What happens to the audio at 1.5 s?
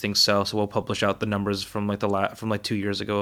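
At 1.5 s the audio runs on intact, with no dropout, click, distortion or other fault at that moment.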